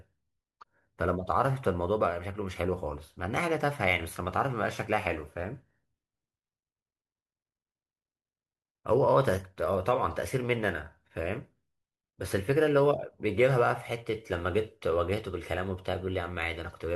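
No technical faults can be heard anywhere in the recording.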